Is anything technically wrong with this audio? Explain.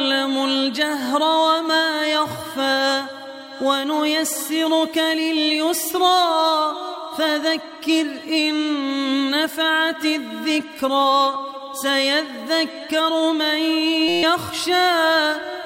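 Yes. From 14.08 to 14.23 s there is a system hang loop. The playback system stalled while the audio hardware kept replaying its ring buffer, so one 5.8 ms fragment, which fits a 256-sample buffer, repeats exactly 25 times. It sounds like a steady buzz at 172 Hz, and about 150 ms of real audio is lost. The waveform shows identical repeating cycles, and the spectrogram shows a comb of harmonics spaced 172 Hz apart.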